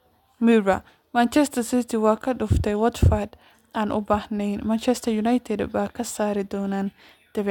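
No dropouts, clipping, glitches or other transmission or processing faults can be heard anywhere in this speech recording.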